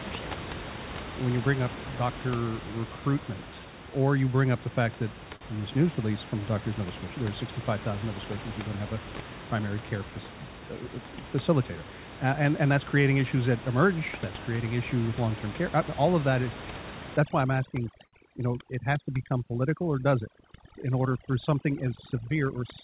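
At 5.36 to 5.43 s, between "up the fact that" and "in this news release", a short stall from a late packet occurs. The jitter buffer ran dry, so the receiver held the last sound for 48 ms before resuming at the same point. Nothing is lost, but the speech briefly hangs with a slight buzz or dip.

From 17.17 s to the end, overdone noise removal is audible. The room noise, about 13 dB below the speech, gets suppressed band by band so aggressively that the background drops and breaks up into twinkling specks. Quieter parts of the voice are removed along with it, and the voice is already narrow from the call codec's cutoff at 4 kHz.

Inside that stretch, at 18.06 to 18.15 s, a second stall from a late packet stretches the last sound by 70 ms while the buffer waits, with the same brief held quality.

From 22.14 to 22.58 s a jitter buffer speed-up trims the excess buffered audio by cutting out short pitch-period pieces repeatedly, roughly 40 ms in total. 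The speech runs at about 107% speed with unchanged pitch and sounds hurried.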